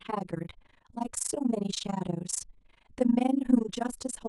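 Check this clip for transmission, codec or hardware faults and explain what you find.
Two faults run through the whole speech recording.

Channel delay (comb filtering) is present throughout: one channel lags the other by about 10 ms before mono summing, cutting regularly spaced notches from around 40 Hz upward, so the sound is hollow and phasey.

Overlap-add ripple is also present throughout: frames were rejoined with mismatched overlap, so the level dips by about 60 dB roughly 30 times a second, giving a fast, rough flutter.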